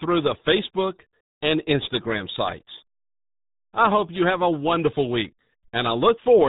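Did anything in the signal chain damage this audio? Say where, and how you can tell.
Yes. The damage comes at the codec stage, from the RealAudio 14.4 codec, across the whole clip. The speech is muffled and gargly, with heavy codec damage consistent with a roughly 8 kbit/s stream. A spectrogram shows a hard ceiling at 3.8 kHz, with nothing above it, and smeared, blocky formants below it.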